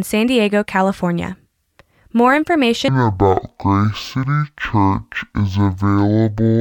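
From 2.88 s to the end, the speech drops to half speed and sits a full octave (12 semitones) lower. This is stereo read as mono: interleaved left and right samples are played back-to-back as one channel, doubling duration and leaving a faint mirrored image in the upper spectrum.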